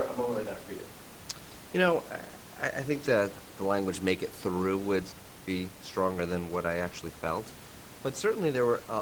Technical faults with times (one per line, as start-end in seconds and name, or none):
none